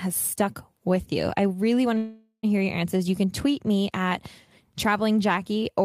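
A call audio freeze runs from 1.97 to 2.45 s in this speech clip. The last sound is stretched into a fading buzz or hiss, ending in about 100 ms of silence. Speech then resumes where it stopped, about 460 ms late, with nothing lost. The likely cause is delayed packets draining the jitter buffer.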